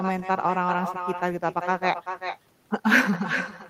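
Speech, shadowed throughout by echo with no canceller. A quieter, thinner copy returns roughly 0.4 s later, about 8 dB down. A far-end loudspeaker feeds the microphone unremoved.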